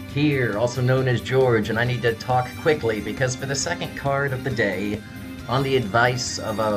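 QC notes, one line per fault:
No faults heard.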